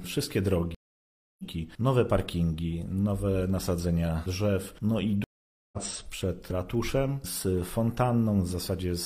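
At 0.75 s and again at 5.24 s, a stream reconnect: the audio goes silent for 0.64 s, then 0.48 s, as the player reconnects with a fresh decoder. Unlike a plain dropout, it resumes further along, skipping roughly 0.7 s and half a second respectively.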